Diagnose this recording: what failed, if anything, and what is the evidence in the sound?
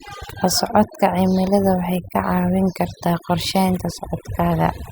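The failure is overdone noise removal in the processing stage, and it runs through the whole speech clip. The gaps between phrases collapse to near silence, with little twinkling specks where leftover noise pokes through. The suppressor is gating individual frequency bands whenever they sit close to its noise estimate, and it's set so hard that the quieter parts of the voice get pulled down along with the noise.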